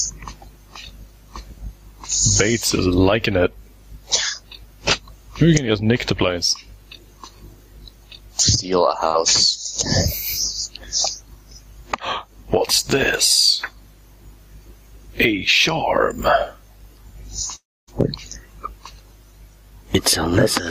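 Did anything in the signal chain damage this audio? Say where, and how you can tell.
Yes. Throughout the clip the gain swings by around 15 dB, squashing loud and soft parts together. This is gain pumping, likely from input gain set far too high driving a fast limiter in the call processing.

From 17.55 to 17.89 s the sound breaks off. A fading buzz briefly continues the last sound, then about a quarter second of silence follows before audio resumes with 320 ms missing. This is a long network dropout, likely lost packets concealed by the receiver.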